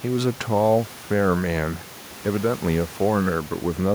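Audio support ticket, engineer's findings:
Nothing stood out on listening to the speech; the room's background noise sits about 22 dB below it, as expected for the recording space.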